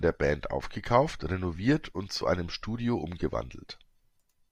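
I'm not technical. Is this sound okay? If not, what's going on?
No. At about 2.21 s, just after "aufgekauft renoviert und", there is a tiny skip where the speech briefly jumps forward. This is an overlap between stream segments. The audio arrives in one-second pieces, and two neighbouring pieces were marked as covering the same moment. The player discarded the supposed duplicate, cutting out a few milliseconds that were never repeated. Unlike a dropout, which leaves a brief silence, nothing goes quiet here. The sound simply jumps ahead.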